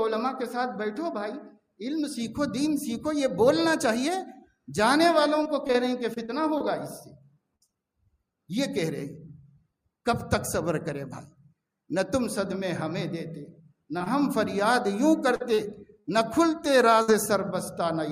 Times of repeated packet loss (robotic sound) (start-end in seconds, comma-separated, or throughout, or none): 5.43-7.70, 15.36-17.10